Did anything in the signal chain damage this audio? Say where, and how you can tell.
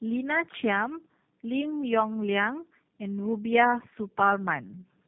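Yes, at the codec stage, and it runs through the whole clip. This is tandem speech coding: the speech went through a low-rate coder, was decoded to a G.711 A-law link, then coded again. The roughness and warble suggest two passes of something like G.729A at 8 kbit/s with a G.711 hop between them. The second encoder models the first one's errors as if they were speech, so the artefacts stack. Nothing reaches above 3.7 kHz, which adds to the muffled feel.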